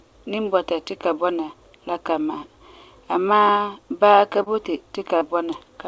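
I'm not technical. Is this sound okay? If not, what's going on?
No. There is short concealed packet loss at 4.43 to 4.49 s, just after "baa ka", and at 5.18 to 5.24 s, just after "baa ka boti". About 30 ms of audio went missing each time, and the receiver covered the gap by stretching the preceding sound, leaving a brief smear or wobble.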